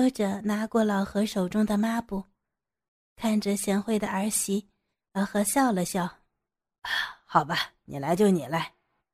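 Nothing in the speech stood out as a technical fault on listening.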